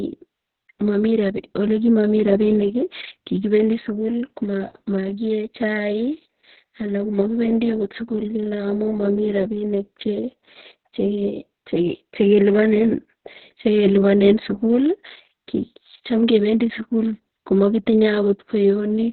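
From start to finish the speech carries heavy Opus voice compression. Everything above about 4.2 kHz is gone, so the voice sounds muffled and boxy, and the coarsely coded excitation adds a hoarse, slightly robotic buzz, which fits the narrowband SILK coder at roughly 6 kbps. On a spectrogram the energy stops at a flat ceiling near 4.2 kHz, and the harmonics below it look smeared and blocky rather than cleanly striped.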